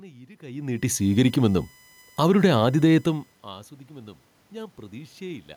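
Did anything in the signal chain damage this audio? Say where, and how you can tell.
Yes. In the analogue wiring or power path, a steady USB whine runs through the whole clip: a fixed tone at 1 kHz, strongest at its 2 kHz harmonic, around 35 dB below the speech. The 1 kHz spacing matches USB's 1 ms frame rate, unlike mains hum at 50 or 60 Hz.

In call processing, automatic gain rising occurs twice: a 6 dB swell from 0.39 to 1.65 s, and a 4 dB swell from 2.4 to 5.21 s after the input fell about 24 dB. The room noise swells along with the voice, which shows a gain stage rather than the talker's movement near 0.5 and 3.0 s.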